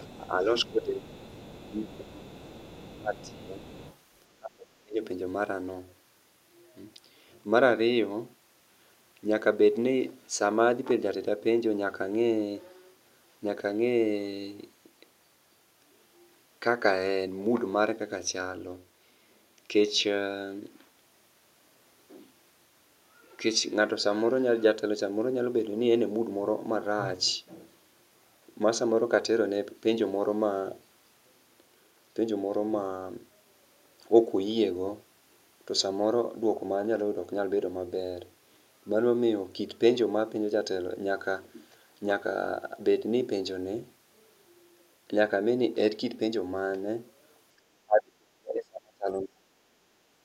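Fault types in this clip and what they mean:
other side's voice leaking through: The echo canceller likely left some loudspeaker signal in the microphone path, so a faint second voice sits beneath the talker through the first four seconds.
speech suppressed in double talk: With both sides talking, the canceller likely turned everything down, so the talker dips briefly several times early on and drops deeply from 47.57 to 49.71 s.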